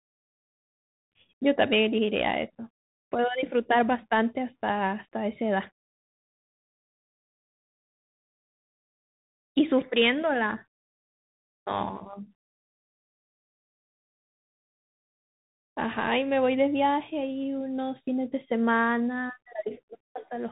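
Across the whole clip the speech carries the signature of the Bluetooth CVSD headset codec, and the damage is plainly audible. The codec encodes each sample as a single up-or-down bit with an adaptive step, which fits a 64 kbit/s stream. It can't keep pace with loud, fast-changing sounds, so sibilants turn scratchy, and a grainy hiss sits under everything. On a spectrogram, energy stops abruptly at about 3.8 kHz. The waveform shows fine staircase roughness.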